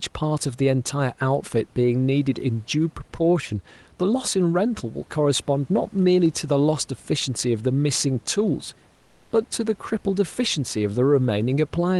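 From 8.93 to 9.31 s, about 380 ms, the room background gives way to comfort noise in place of the background: a smooth, featureless hiss about 2 dB quieter, likely the Opus call codec's discontinuous transmission filling a pause. Unlike a dropout or gate, the gap is filled with noise, not silence.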